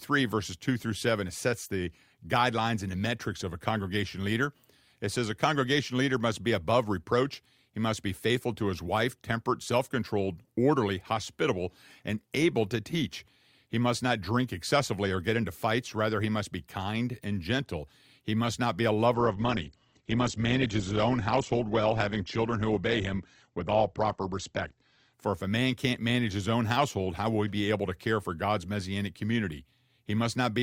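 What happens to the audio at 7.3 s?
Nothing goes wrong at 7.3 s; the speech carries on intact through that moment, with no dropout, click or distortion to be heard.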